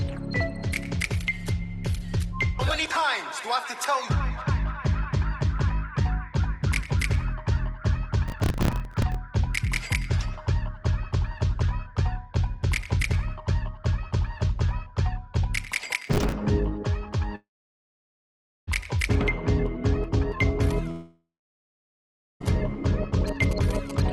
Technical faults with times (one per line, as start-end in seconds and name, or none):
8.28-9.15 processor overload crackle
16.07-16.32 processor overload crackle
17.35-18.69 long network dropout
20.91-22.42 long network dropout
23.28-24.13 GSM signalling bursts